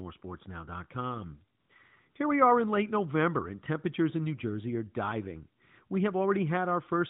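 At 1.60 to 1.70 s the background drops out and is replaced by a smooth, steady hiss for about 100 ms: AMR comfort noise. The sender's voice activity detector treated the gap as silence and stopped sending speech frames, so the receiver synthesised filler noise from a rough level and spectral description. It happens again from 2.10 to 2.16 s, about 60 ms, just before "we are in late", where the noise switches in and out abruptly against the narrowband speech, whose light coding fits a 12.2 kbps AMR mode.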